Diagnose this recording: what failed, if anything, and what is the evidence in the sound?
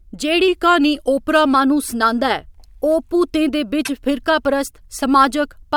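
From 0.48 to 1.54 s the speech slows by about 6% and drops roughly a semitone (108 cents), then snaps back. This is likely a drift correction step in the buffer stage.

At 3.85 to 3.90 s the speech jumps ahead, over a span consistent with 24 ms MP3 frames. The codec stage is likely at fault, with a broken MP3 bit reservoir after lost frames.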